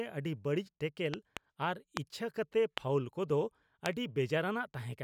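Loud pops break into this speech clip: a double pop at 1.14–1.39 s, then single pops at 1.97–1.99 s, 2.78–2.80 s and 3.86–3.88 s, each roughly 20 dB above the speech. They are likely sudden voltage spikes, such as static or a switching glitch, riding on the speech, which carries on underneath.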